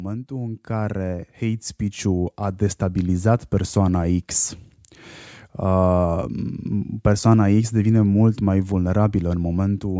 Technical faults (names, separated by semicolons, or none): automatic gain rising